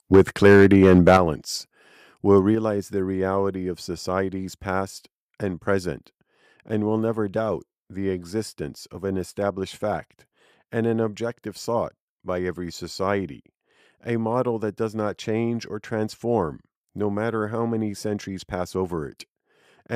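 From 0.14 to 1.17 s, microphone overload leaves a harsh, crackling edge on the loudest syllables, with peaks about 7 dB over the converter's limit and roughly 7 percent of samples flattened. The likely cause is input gain set too high for the converter. Unlike a level drop, the distortion sits on the peaks themselves. At 0.16, 1.17 and 2.55 s (just before "the reality of societies"), the microphone volume steps down by about 4, 8 and 5 dB. Voice and background fall together, likely because the call software cut the device gain in response to the clipping.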